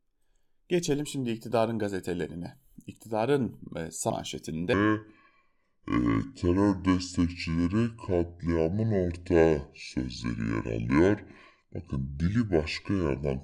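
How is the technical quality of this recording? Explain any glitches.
The recording has one clear fault: a section at the wrong speed that runs from 4.73 s to the end at 13.44 s. From that point the speech plays at 0.659 times its proper rate, so it drags and drops roughly seven semitones, sounding deep and sluggish. The likely cause is playback or editing against a mismatched clock. On a spectrogram the harmonics and formants step down abruptly at 4.73 s. In the waveform, syllables stretch visibly longer.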